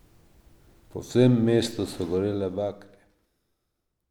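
No technical faults are audible.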